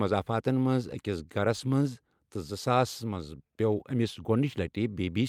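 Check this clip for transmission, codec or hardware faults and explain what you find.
Listening to this speech recording turns up no faults. There is nothing further to report.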